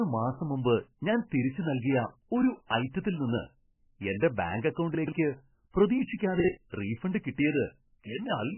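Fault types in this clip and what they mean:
MP3 compression: The whole clip sounds watery and swirly, and nothing is heard above 3 kHz, so the treble is missing throughout. Weak parts of the spectrum flicker on and off, and consonant attacks smear. The damage is heavy. This is likely MP3 coding at a very low bitrate, around 10 kbps. At that rate the encoder zeroes many frequency lines frame by frame and cuts the top end at a fixed point.
Chunks out of order: Right after "എന്റെ ബാങ്ക്", from 4.95 to 5.12 s, the speech jumbles for a moment. A chunk of about 43 ms plays three chunks later than it should, after the chunks that belong behind it. No audio is lost, but the sequence is wrong. Three hard joins sit inside this short stretch, and they make that moment sound garbled and disjointed.
Pre-echo: From 6.18 to 6.20 s, a short hiss of about 23 ms comes just before a sharp attack. The codec spreads its quantisation noise over a whole block. 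Here the attack falls late in its block, so noise sized for the loud onset also fills the quiet gap before it. The attack itself then sounds softened and smeared rather than crisp.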